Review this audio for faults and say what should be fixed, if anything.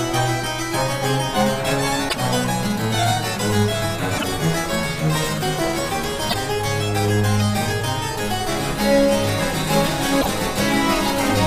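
Damaged data in a compressed stream causes short glitches at 2.05–2.15 s, 4.14–4.24 s, 6.26–6.34 s and 10.18–10.27 s. Corrupt bytes make the decoder misread frames and lose sync. Verify transfers with checksums and keep metadata out of audio frames.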